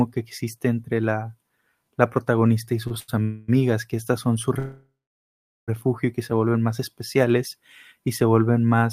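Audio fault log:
2.87–2.93 s and 3.00–3.10 s, short stall from a late packet: after "la protagonista y" the last sound is held about 33 ms and then 86 ms while a late packet arrives, then resumes where it stopped.
3.22–3.50 s and 4.59–5.70 s, call audio freeze: the sound is continued as a fading buzz for about 0.26 s, then about 1.09 s after "son su", of which about 0.77 s is silence, before resuming at "y que". This is likely from delayed packets draining the jitter buffer. Nothing is lost, but each stop inserts a gap.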